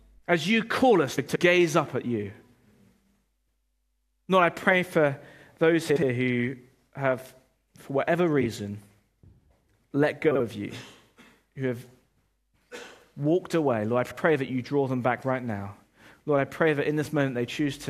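Frames out of order occur at 1.17 s, 5.89 s (after "I pray for those"), 8.41 s, 10.31 s and 14.04 s (before "that you draw them"). In each, a 50 to 190 ms stretch plays with its two halves exchanged, giving a garbled flutter. A spectrogram shows abrupt vertical seams where the harmonic contours jump.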